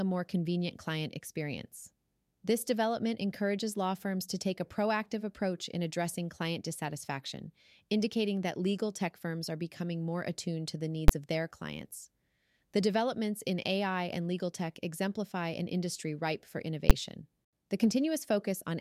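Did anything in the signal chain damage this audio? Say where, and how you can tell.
Yes. Invalid numbers at full scale arose at the sample-format conversion stage, where infinite values were clamped to maximum level for a whole block. Single loud bangs hit at 11.08 s, after "more attuned to the", and 16.90 s, after "an industry ripe for". Each lasts about 10.7 ms, which fits a 512-sample block.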